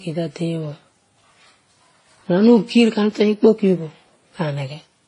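Throughout the speech, the signal likely passed through a chain of low-bitrate lossy codecs, pointing to Vorbis at 30 kbit/s, then WMA at 32 kbit/s, then Vorbis again at 35 kbit/s. This transcoding between lossy codecs stacks their artefacts so the different artefacts are heard together, with nothing above 10.1 kHz.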